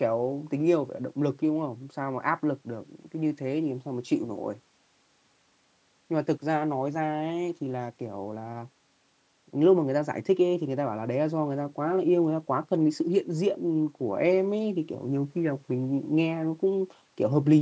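The speech shows no technical faults; it carries the ordinary shaping of call microphone processing, with the lowest bass trimmed by its high-pass filter and no content above 8 kHz.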